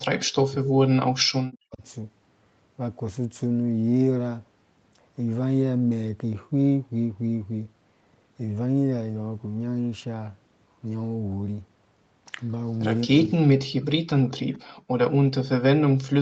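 From 0 to 1.82 s, 13.05 to 14.68 s, and 15.1 s to the end, the talker's level collapses in pieces by as much as about 40 dB. This is speech suppressed in double talk, likely from an echo canceller that could not separate the near talker from loudspeaker echo while both sides spoke and so attenuated everything. Each burst sounds like the talker chopping out or sinking under the line, against a call band topping out near 8 kHz.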